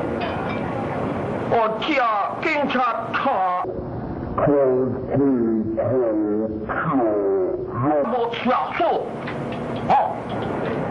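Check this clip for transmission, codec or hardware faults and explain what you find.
There's one fault here. From 3.64 to 8.04 s there's a section at the wrong speed: it plays at half speed, likely from a wrong clock setting, so the sound drags and drops around ten semitones.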